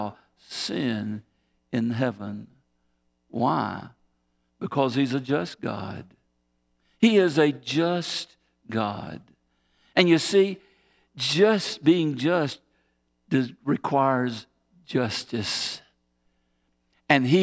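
A speech recording, and nothing in it is technically wrong.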